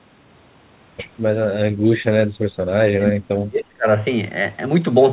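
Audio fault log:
2.25–2.46 s and 2.8–3.87 s, speech suppressed in double talk: the speech dips sharply, about 30 dB in the short first dip, which affects roughly 150 ms, and up to about 35 dB in the second, which affects close to a second. This is likely an echo canceller that could not separate the local talker from loudspeaker echo while both sides spoke, so it attenuated everything. The 4 kHz band limit of the call path is heard throughout.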